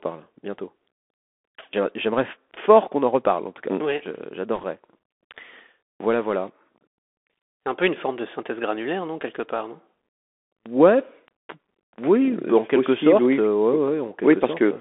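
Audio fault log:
throughout: Bluetooth CVSD headset codec. The sound is squeezed into a narrow telephone-like band, from about 250 Hz up to 3.5 kHz. Nothing above that survives, so it sounds dull and boxy. The codec sends one bit per sample, saying only up or down, with an adapting step size. Fast, loud high content outruns that step and distorts. S sounds come out scratchy. A fine granular hiss sits underneath. The damage is plainly audible and fits a 64 kbps CVSD stream.
4.55 to 4.64 s: bit errors on a Bluetooth voice link. For about 90 ms a rushing, crackly noise rides over the speech. No loud click occurs. In this codec every bit carries the same small weight, and a wrong bit's effect fades quickly. So flipped bits add texture rather than sharp pops. The error rate is around one or two percent.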